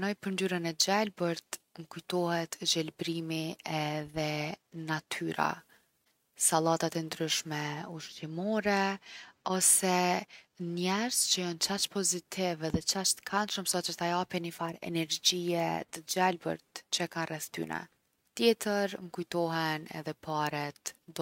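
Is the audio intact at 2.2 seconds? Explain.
Yes, at 2.2 seconds the speech runs on without any fault.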